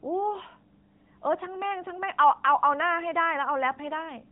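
Speech, carried throughout by an AMR narrowband mobile codec: everything above 4 kHz is gone, and the plainly buzzy, synthetic texture fits a mid-rate mode around 10.2 kbps.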